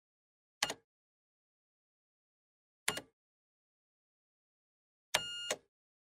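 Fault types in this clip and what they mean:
Nothing stood out on listening; the audio ran without any audible disturbance or irregularity.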